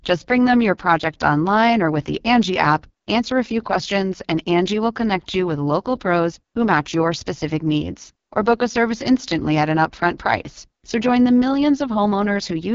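AMR wideband (HD Voice) codec damage runs from start to finish of this speech clip, and it is heavy. The coder models the voice as pulses driving a vocal tract filter below 6.4 kHz and pads the band above with shaped noise, so nothing survives beyond 7.3 kHz. Here the voice comes out rough and raspy, which points to one of the codec's lowest rates, around 6.6 kbit/s.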